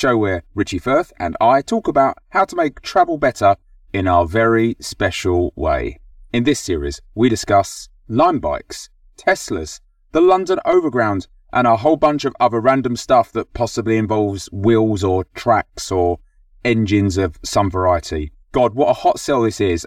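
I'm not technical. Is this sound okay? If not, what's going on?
No. Channel delay (comb filtering) runs through the whole clip, from start to finish. One side of the stereo recording arrives about 3 milliseconds late, and when the two sides are mixed into one, they partly cancel at a regular series of pitches starting around 150 Hz. That carves evenly spaced gaps into the sound, so the speech comes across hollow, as if heard through a tube.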